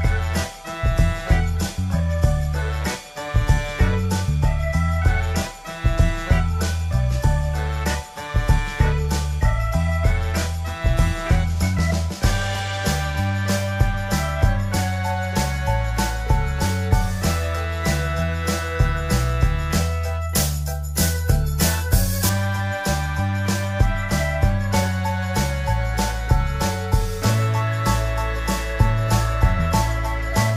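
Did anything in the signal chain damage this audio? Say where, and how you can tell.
Yes. From 20.29 to 22.29 s, pre-emphasis was left on. A treble boost from a 50 µs FM curve was never undone by its matching de-emphasis, likely at the playback stage. The top end sits about 10 dB high at 10 kHz against 1 kHz, so the sound turns thin, bright and sibilant. On a spectrogram that two-second block shows brighter energy above 4 kHz.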